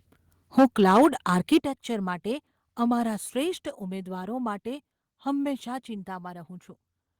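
From 0.58 to 1.57 s there's microphone overload: peaks push about 8 dB past the converter's ceiling with around one in twenty samples flattened, giving a harsh crackle, likely from input gain set too high. Microphone volume stepped down at 0.59 s (about 3 dB), 1.59 s (about 10 dB) and 3.63 s (about 3 dB), sudden level drops in speech and background, likely the call software cutting input volume.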